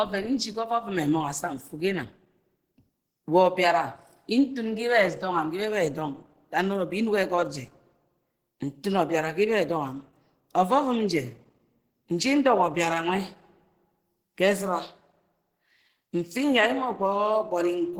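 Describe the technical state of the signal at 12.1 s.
At 12.1 s the speech carries the same damage heard across the whole clip: plainly audible Opus compression, likely in its hybrid speech mode at a low rate near 16 kbps, where sparse bits leave the speech hoarse, grainy and somewhat muffled even though content still reaches about 20.2 kHz.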